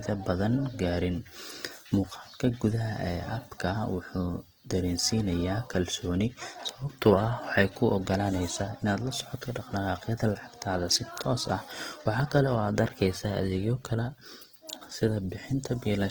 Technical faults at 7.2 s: Opus compression

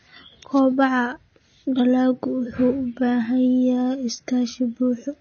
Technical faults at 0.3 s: AAC compression

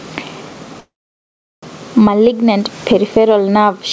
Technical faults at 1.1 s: gain pumping; call audio freeze

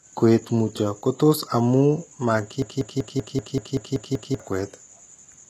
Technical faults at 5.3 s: HE-AAC compression

